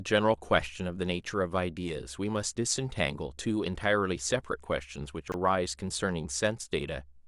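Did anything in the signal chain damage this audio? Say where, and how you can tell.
Yes. Chunks out of order in the network or jitter buffer, 5.28 to 5.34 s. A 20 ms chunk plays two chunks late. This causes a brief jumble with three hard joins.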